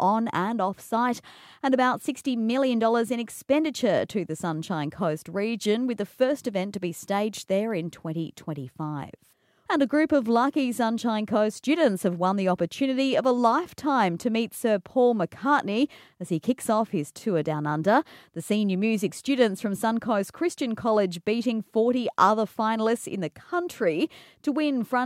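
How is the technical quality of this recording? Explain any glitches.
Nothing here stands out as a glitch; the recording holds together without any technical faults to point to.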